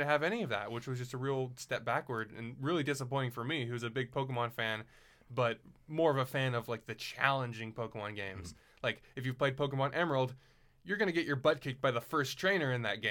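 Speech clip, no audible faults.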